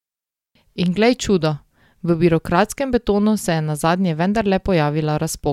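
No technical faults can be heard in this speech recording, so there is nothing to describe in time order.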